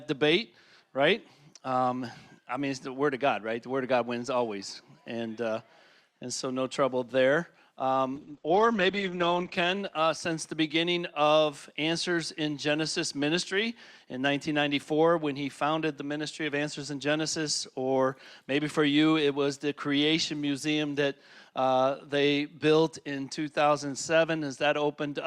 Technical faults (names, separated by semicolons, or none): call bitrate drop